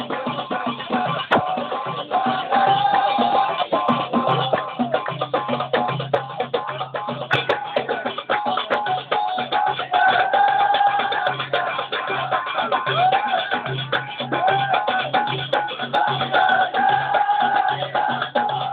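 Nothing in this clip stands out as a technical fault, so there's nothing here to flag.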